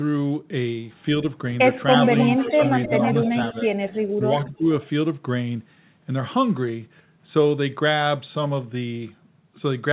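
From 2.05 to 3.3 s there's an echo leak: a copy of the speech trailing the original by 309 ms and only around 10 dB quieter. The likely cause is a speakerphone on the far side whose echo canceller didn't catch everything its mic picked up. Right after, from 3.33 to 3.37 s, the speech dips by about 10 dB. That's likely speech suppressed in double talk, where the canceller couldn't separate the talker from the echo and turned both down. Short echo scraps come back at 3.93 to 3.98 s, much weaker at roughly 35 dB down, and at 4.44 to 4.49 s, around 25 dB down, with the same 309 to 310 ms lag. In between, 4.15 to 4.26 s drops by about 20 dB, and 4.48 to 4.69 s sags by about 10 dB again, which gives the speech a brief choppy feel. All of this sits inside the roughly 4 kHz band of the G.711 call path.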